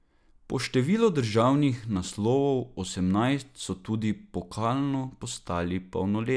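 No technical faults occur at any point in the recording.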